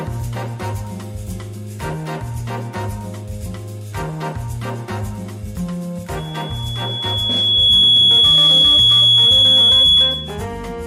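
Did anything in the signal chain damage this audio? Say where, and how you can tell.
Yes. A loudspeaker feedback squeal starts at 6.17 s and runs to 10.45 s, in the acoustic loop between the playback loudspeaker and the capture microphone. A single 3.4 kHz tone rises out of the sound over about a second and a half and settles roughly 15 dB above the signal. The microphone was hearing its own loudspeaker, and at 3.4 kHz the loop gain went above one, so that frequency fed on itself until the tone stopped.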